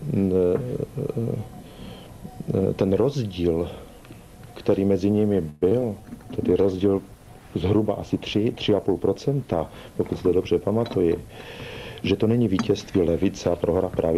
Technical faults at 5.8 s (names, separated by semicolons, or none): short concealed packet loss